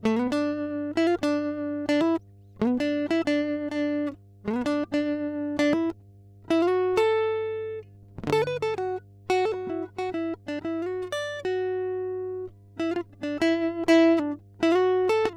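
Mains hum runs under the music throughout: a steady 50 Hz drone, roughly 25 dB below the music, from power-line coupling, showing as a constant horizontal line at 50 Hz on a spectrogram.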